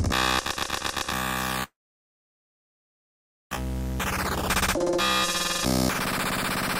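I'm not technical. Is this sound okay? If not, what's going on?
No. From 1.63 s to 3.57 s there is a gap: the sound trails off into a brief fading buzz, then goes silent for nearly two seconds. This is likely a long network dropout. Roughly a second of the original sound never arrived and is skipped when playback resumes.

From 5.39 s to 5.95 s the sound runs at about 117% speed without changing pitch, so it feels briefly hurried. This is a jitter buffer speed-up: the receiver trimmed tiny slices, about a tenth of a second in total, to catch up on delay.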